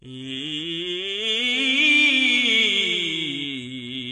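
From start to finish the music sounds dull and smeared, with a fizzy, warbling edge on sustained tones. On a spectrogram everything stops flat at 9.8 kHz. This is likely AAC compression at a low bitrate, around 32 kbps.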